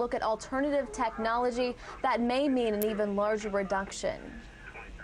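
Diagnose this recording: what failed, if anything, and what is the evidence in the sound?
A sharp snap or tight cluster of clicks sits on top of the sound at 2.82 s. It is very brief and fairly loud, peaking near -10 dBFS. The stage is the analogue wiring. This is an electrical switching spike, likely from a nearby switch, motor or static discharge arcing. The cable or input picked up that burst of interference. It was added to the audio rather than replacing it.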